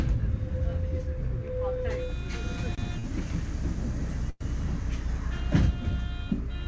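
At 2.75 s and again at 3.00 s, short stalls from late packets occur: a packet missed its slot, the jitter buffer ran dry, and the receiver stretched the last sound by 27 ms and then 44 ms. Each moment of the sound hangs slightly too long with a faint buzz or dip, and nothing is lost.

From 4.30 to 4.43 s a call audio freeze is heard, likely from packets held up in transit. The receiver filled about 105 ms by extending the last sound into a fading buzz or hiss that ends in roughly 20 ms of silence, then resumes where it stopped. Throughout, the audio carries nothing above 8 kHz, which fits a wideband call codec.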